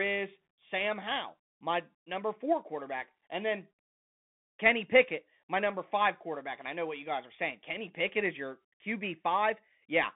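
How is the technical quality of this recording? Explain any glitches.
The quality is poor throughout: the speech has gone through a Bluetooth CVSD headset codec. Its one-bit delta coding, consistent with 64 kbps, leaves a 150 Hz to 3.6 kHz band, plainly audible grit, scratchy s sounds, and an empty spectrogram above 3.8 kHz.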